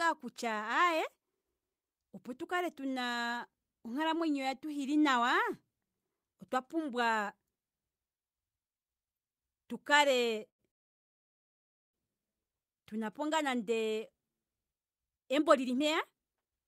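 It's a speech clip, and things go wrong around the 10 s mark. First there's a short stall from a late packet at 10.49–10.61 s: the jitter buffer ran dry while waiting on a packet that hadn't turned up, so the receiver stretched the last bit of sound for about 100 ms until it arrived, then carried on from the same spot. Nothing's actually lost; you just hear a sound held a touch too long, with a faint buzzy or dipped quality to it.

Right after that, from 10.71 to 11.95 s, there's a call audio freeze. The audio stops for about 1.2 s, and almost all of that is plain silence rather than a fading buzz. Then it picks up exactly where it left off, so a gap has been pushed into the speech but no content is missing. That pattern likely comes from packets getting held up in transit long enough for the buffer to empty completely.

Then near the end, from 15.05 to 16.61 s, you get a jitter buffer speed-up. 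With all that delay piled up, the buffer was holding more audio than it wants, so the receiver trimmed out lots of tiny pitch-period-sized chunks in a row, roughly 0.7 s in total. The speech plays at about 140% speed with the pitch unchanged, so it comes across noticeably rushed until the clip ends.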